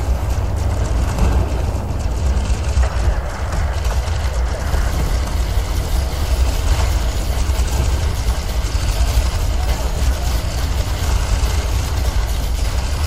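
No technical faults can be heard anywhere in the clip. There are no dropouts, glitches or distortions to point to at any moment.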